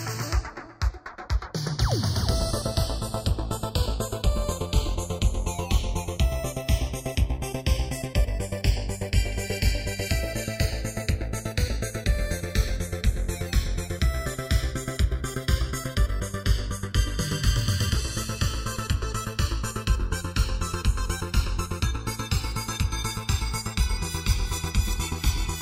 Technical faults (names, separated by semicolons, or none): channels drifting apart